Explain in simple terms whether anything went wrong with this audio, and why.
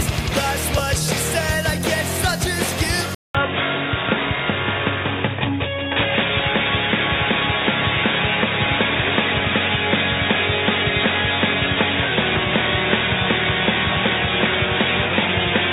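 At 3.15 s the audio briefly cuts out, then turns dull and muffled to the end, with faint new background noise, likely an input switched to a poorer device.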